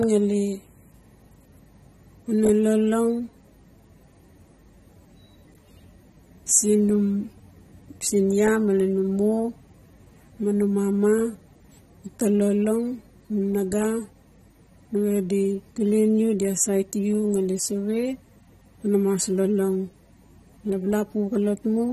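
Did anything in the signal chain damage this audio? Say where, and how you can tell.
Yes. AAC compression damage runs throughout the speech, at the codec stage. Nothing reaches above 13.8 kHz, and sibilants turn dull, smeared and fizzy. The likely cause is AAC-LC quantising its frequency lines coarsely, which fits a bitrate around 32 kbps.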